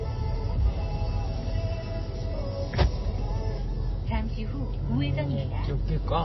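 Throughout the clip the treble stops dead at about 5.8 kHz, and what remains has a watery, swirling texture with metallic chirps on bright, noisy parts of the sound and smeared attacks. This is plainly audible damage that likely comes from MP3 compression at a low bitrate, consistent with roughly 24 kbps. Starved of bits, the encoder discards everything above its cut-off and lets weak frequency lines flicker on and off between frames. On a spectrogram this appears as a flat ceiling at 5.8 kHz with patchy, blocky islands of energy below it.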